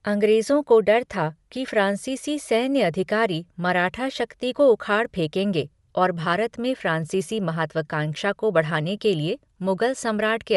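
From start to finish the speech carries plainly audible Bluetooth LC3 compression damage: a breathy, grainy edge on every sound, with the top of the spectrum thinned out and replaced by a hiss-like texture. The likely cause is the LE Audio transform codec discarding upper-band detail and filling the gaps with noise. On a spectrogram the high band looks smeared and speckled in blocks along the time axis. The blocks fit 10 ms frames, and the degree of damage fits a moderate setting around 48 kbps.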